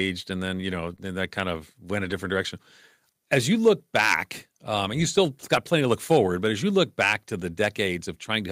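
Speech, with a short concealed packet loss at 0.95 to 0.99 s: 20 ms never arrived and the receiver extended the preceding sound, visible as a smeared, overly regular patch in the spectrogram. Two stretches were lost packets rebuilt from error correction, at 2.05 to 2.11 s (40 ms, likely two packets) and 5.55 to 5.57 s (20 ms). These play without a gap but sound rougher, and show as noisier, grainier frames in the spectrogram.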